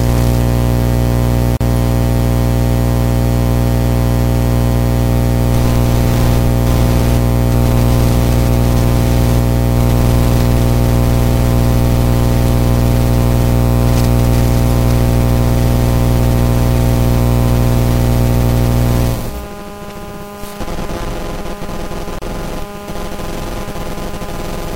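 A recording of sounds with two short dropouts that are gaps at a join of encoded pieces. Silence opens at 1.57 s for about 39 ms and again at 22.19 s for about 32 ms. Each time the sound resumes exactly where it stopped. The codec smears the edges of each gap. Separately encoded segments were joined without removing the encoder's start-up delay and final-frame padding, leaving that padding in as silence.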